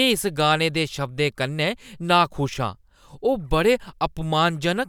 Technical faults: none

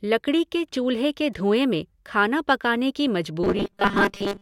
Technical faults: robotic sound from repeated short buffers

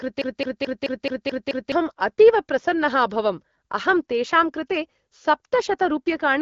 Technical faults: broken-record loop

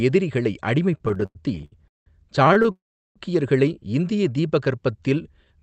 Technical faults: repeated stalls (stutter); call audio freeze; jitter buffer slow-down

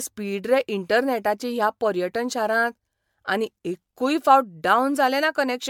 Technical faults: generation loss

